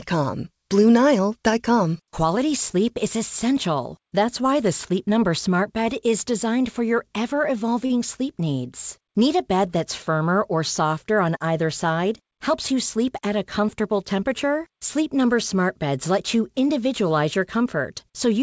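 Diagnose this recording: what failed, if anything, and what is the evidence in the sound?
A short stall from a late packet occurred in the network and jitter-buffer stage at 7.86–7.99 s, between "designed for your ever" and "sleep needs". The last sound is held for about 38 ms with a slight buzz or dip, then resumes where it stopped. Unlike a lost packet, nothing is skipped.

A jitter buffer speed-up follows "either side", at 12.21–13.06 s. The buffer had overfilled, so the receiver cut pitch-period-length slices, roughly 50 ms in all, and the audio runs at about 105% speed and sounds hurried. Pitch stays put, which rules out a resampling or clock-rate error. The call codec path passes nothing above 8 kHz.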